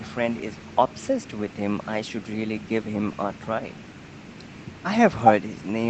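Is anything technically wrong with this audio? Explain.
No, nothing technically wrong.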